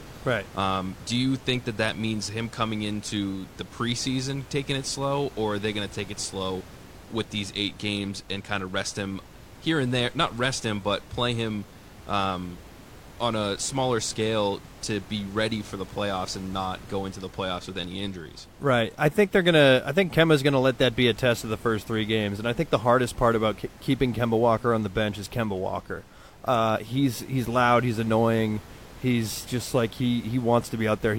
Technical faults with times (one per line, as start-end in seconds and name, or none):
none